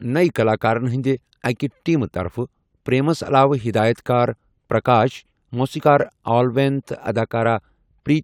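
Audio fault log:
No faults heard.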